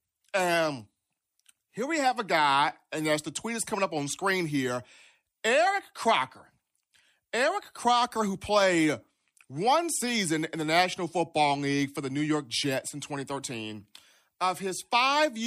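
Listening through the speech, nothing stood out as a technical problem at any point.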